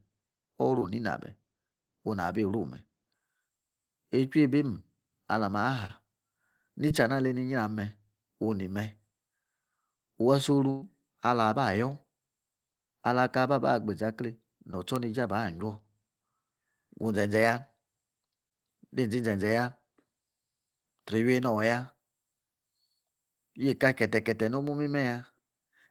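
The clip is speech, and it has two kinds of fault. The first is short concealed packet loss at 0.79, 5.87, 6.89, 14.72 and 18.49 s. Each time, about 20 ms of audio failed to reach the decoder in time. The receiver bridged the gap by extending the preceding sound for roughly 12 to 18 ms before crossfading into the real signal. What you hear is a tiny smear or wobble, and a brief consonant may go missing. The second is a burst of packet loss from 10.70 to 10.84 s. Here about 120 ms failed to arrive, and the receiver filled roughly 114 ms of it by carrying on the last sound while fading it down. There is no true silence in this stretch. Instead the sound stalls into a held buzz or a dwindling hiss, then picks up further along with that stretch of speech gone.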